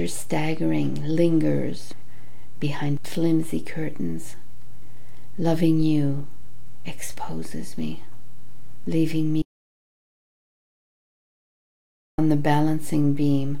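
At 9.42 s the sound cuts to dead silence until 12.18 s. This audio dropout to silence, likely a lost input, erases 2.76 s.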